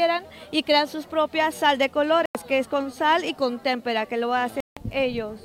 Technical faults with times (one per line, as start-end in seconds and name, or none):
2.26-2.35 Bluetooth dropout
4.60-4.77 Bluetooth dropout